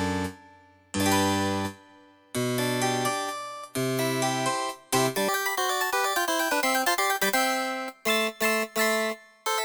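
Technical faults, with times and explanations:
5.29–9.65 s, audio read two samples at a time (double speed): the sound abruptly races at twice its speed and jumps a full octave, 12 semitones up. The reader took each pair of samples as one frame, so time halves.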